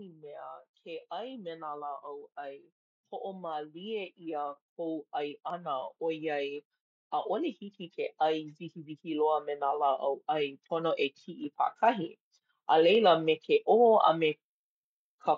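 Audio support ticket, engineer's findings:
Automatic gain rising, 0.05–2.31 s (about 4 dB) and 2.96–6.66 s (about 8 dB). AGC read speech as too quiet, ramped gain slowly; voice and background swell together.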